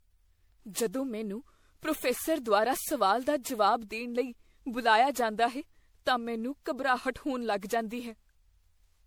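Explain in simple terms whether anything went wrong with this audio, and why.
Something did go wrong, and it's there from start to finish. The speech sounds swirly and hollow, with a watery smear over everything, and the starts of sounds come out blurred. That's generation loss: the audio was likely squeezed through a lossy format, MP3 by the sound of it, and re-saved around ten times. Each save added its own small damage on a slightly different grid, and the damage stacked up.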